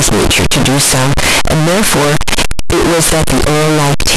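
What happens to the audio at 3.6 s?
At 3.6 s it's the same float read as integer fault running the whole clip: likely 32-bit float samples read as 32-bit integers, giving a harsh, near-square, very loud sound where background noise matches the speech.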